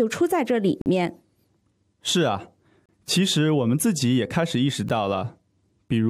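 Speech with a gap between stream segments, heard as hard-edged silent holes at 0.82 to 0.86 s, 2.86 to 2.89 s and 4.89 s, about two seconds apart, matching 2-second segments. Unlike a dropout, no speech is missing; it resumes exactly where it stopped, only slightly delayed.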